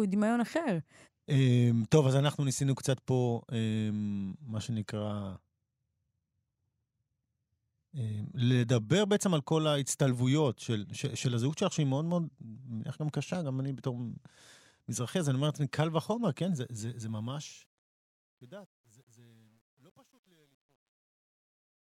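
Speech fading out over its final 5.5 seconds shows truncation distortion on a fade from 16.39 s to the end at 21.89 s, worst from 17.96 s. It fits an undithered 10-bit gain stage: the waveform becomes square steps, and the quiet end sounds gritty.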